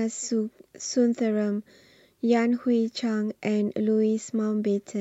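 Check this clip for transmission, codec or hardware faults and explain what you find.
No transmission, codec or hardware faults are audible here.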